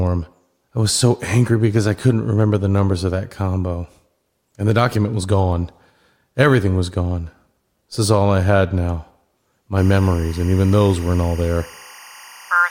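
Timecode bleed enters this speech recording at 9.78 s and runs to the end at 12.71 s, as a steady chirping warble sitting roughly 25 dB beneath the speech. Linear timecode from an adjacent track or cable is leaking into the audio path. Its square-wave code flips between tones of about 1 and 2 kHz, and the rhythm of that switching fits code running at 23.976 frames per second.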